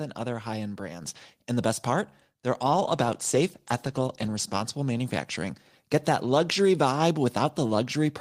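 At 1.02 s the microphone volume is stepped up. The call software judged the input too quiet and raised the device gain in a single jump of about 5 dB. The change is instant, not a smooth ramp. The speech and the background noise get louder together at the same moment. That shared jump is the giveaway. A talker moving closer would not lift the room noise as well.

From 2.77 s to 4.79 s there is a call bitrate drop. The call's bandwidth estimate fell, so the encoder was told to spend far fewer bits. The sound fits a fall from around 32 kbps to about 17 kbps. It stays at that low rate for roughly 1.95 s. The speech is coded more coarsely there and loses clarity. The quality returns by 4.79 s, as the bitrate recovers.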